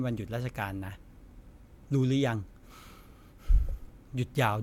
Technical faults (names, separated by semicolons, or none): none